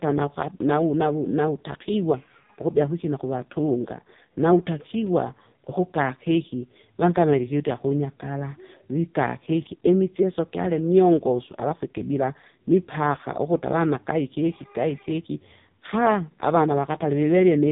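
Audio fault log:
Throughout: AMR narrowband mobile codec. The speech has been squeezed through the narrowband mobile speech coder, so nothing survives above about 3.8 kHz, leaving it dull and phone-like. Instead of the real waveform, the coder sends a vocal-tract filter driven by a few pulses per short subframe. Here the damage is heavy, which fits one of its lowest modes, around 5 kbps. With so few pulses, the voice turns buzzy and synthetic.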